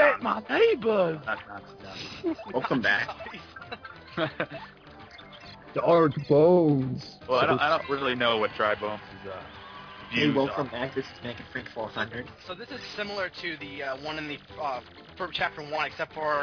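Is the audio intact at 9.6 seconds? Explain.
Yes, at 9.6 seconds the audio plays through intact with no audible fault.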